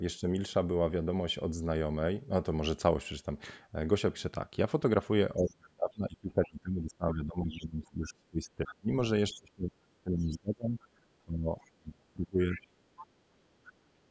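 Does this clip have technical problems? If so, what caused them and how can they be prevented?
Yes. There's speech suppressed in double talk: a brief dip of a few dB at 0.2 s, then heavy suppression from 5.36 to 12.6 s, cutting the talker by up to around 30 dB for about five seconds in total. This is likely the echo canceller ducking everything while both ends talked. Tuning it for full-duplex operation, or using headphones, prevents this.

The other side's voice is leaking through in short scraps at 7.59–7.9, 8.66–8.75, 11.61–11.7, 12.53–13.07 and 13.64–13.72 s, sitting roughly 15 to 35 dB below the talker. That's likely loudspeaker playback the echo canceller didn't fully remove. Headphones or a better-converged canceller keeps it out.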